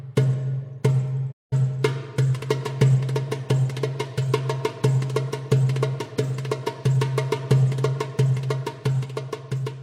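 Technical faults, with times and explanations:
1.31 to 1.54 s, digital broadcast dropout: the sound fades to silence within 20 ms and then returns. The receiver muted on corrupted frames, losing about 190 ms of programme.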